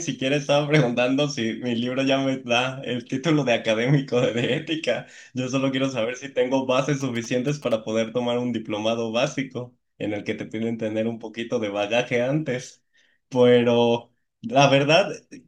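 From 7.0 to 7.73 s, a nearby 2G phone sending signalling bursts is picked up and rectified by the audio circuit, producing GSM signalling bursts: a galloping dit-dit-dit of short 217 Hz buzzes sitting about 20 dB below the speech.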